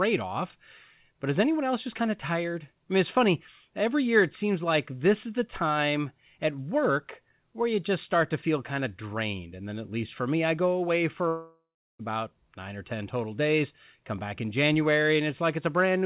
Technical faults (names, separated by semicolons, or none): long network dropout